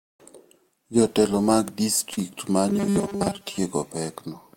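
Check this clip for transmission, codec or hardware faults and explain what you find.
Two transmission faults turn up in the speech.

From 2.13 to 2.19 s, short concealed packet loss: about 40 ms never arrived, and the decoder filled the hole by extending the preceding sound, leaving a brief smear.

From 2.68 to 3.58 s, robotic sound from repeated short buffers: a rigid, metallic 200 Hz buzz covers the speech. The likely cause is a starved stream where a roughly 5 ms buffer replays over and over for most of that stretch, skipping real audio.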